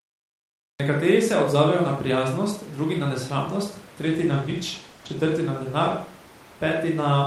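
The clip opens with a cut-off start. Digital silence runs from 0.00 s to 0.80 s. At 0.80 s the speech begins abruptly, already partway through a sound. There is no natural onset and no fade-in. The recording began late, so the first part of the utterance was never captured. What remains starts at full level with a hard edge.

A call bitrate drop follows at 4.02 s, just after "prijaznost drugi na nesramnost". It lasts until 6.51 s. The bandwidth estimate fell, and the encoder's rate went from 40 kbps to 15 kbps. It stayed at the lowest rate for about 1.2 s. The coding grows coarse. The speech turns rough and watery. The high frequencies are cut, so it sounds muffled. Clarity returns as the rate recovers.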